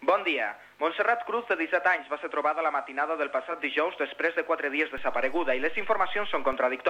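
At 1.90 s the receiver loses its digital signal and falls back to FM. This is digital radio blending to analogue. The changeover is a cross-fade of about 218 ms. Level drops by about 2 dB. A faint hiss rises, roughly 40 dB below the sound. At 3.65 s the digital stream returns and the level and quiet background come back.

At 4.98 s a DC step occurs. The waveform's zero line jumps to a new offset. That sudden shift produces a low thump, while the sound itself carries on unchanged. The offset lasts until 6.53 s. A steady offset itself sits below hearing.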